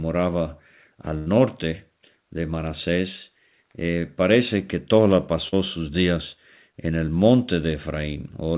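Speech carried over a telephone-band call path, with nothing above 4 kHz, consistent with G.711 mu-law coding, has two packet-loss faults. From 1.18 to 1.28 s there is a burst of packet loss: about 80 ms of audio never arrived, and the receiver filled roughly 82 ms by extending the last sound and fading it down, so a held buzz or decaying hiss replaces the real signal before playback jumps ahead with that stretch gone. At 5.48 to 5.54 s, just before "sus días en el", a short concealed packet loss removes about 40 ms. The decoder synthesised a 40 ms continuation of the preceding sound, from its pitch or as shaped noise, and crossfaded back into the received audio, leaving a brief smear or wobble where a short sound may be swallowed.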